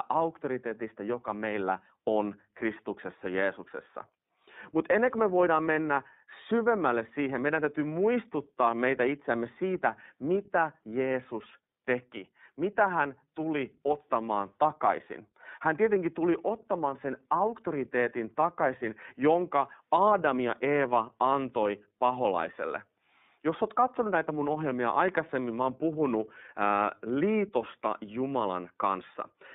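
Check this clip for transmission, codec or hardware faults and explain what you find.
One codec fault runs through the whole clip. Throughout, the speech sounds plainly rough, synthetic and thin, confined to roughly 150 Hz to 3.7 kHz. This is the iLBC codec coding each 30 ms frame independently, which fits its 13.33 kbps mode.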